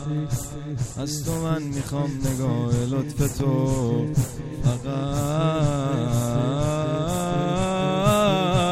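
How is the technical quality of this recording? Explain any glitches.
There is one glitch, a single loud pop from 3.40 to 3.43 s. It is a short, sharp thump that rises a few decibels above the surrounding level while the sound carries on underneath. The likely cause is a sudden voltage step or pulse, from a plug, a switch, static or a driver glitch, that entered the signal path and was briefly shaped by the following circuitry. Unlike a dropout, nothing is missing: the burst sits on top of uninterrupted audio and occurs only once.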